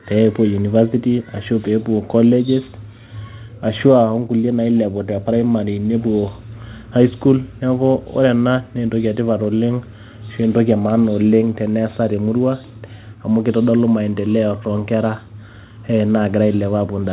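No technical faults occur at any point in the speech, which comes through a G.711 mu-law call path at 64 kbps with nothing above 4 kHz.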